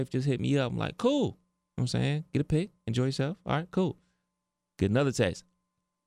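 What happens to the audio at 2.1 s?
Nothing goes wrong at 2.1 s; the speech plays through that moment intact, with no dropout, click or distortion.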